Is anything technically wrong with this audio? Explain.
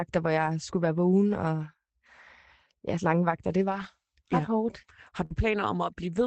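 Yes. There are two kinds of fault: packets rebuilt from error correction, and one short burst of packet loss.

Lost packets rebuilt from error correction occur at 0.45 s, from 3.71 to 3.85 s, and at 5.30 s. Each lost packet was replaced by the lower-quality copy carried in the following packet, so nothing drops out. Instead, those stretches (20 ms, then 80 ms, then 20 ms) sound briefly rougher and noisier than the speech around them.

A burst of packet loss runs from 5.25 to 5.32 s. The receiver had nothing to play for this stretch, so it stretched the last sound for about 48 ms, fading it into a held buzz or hiss, while about 40 ms of the original audio is simply skipped before speech resumes. The final 20 ms overlaps the rebuilt packet at 5.30 s. All of this sits within a call-codec path whose audio tops out around 8 kHz.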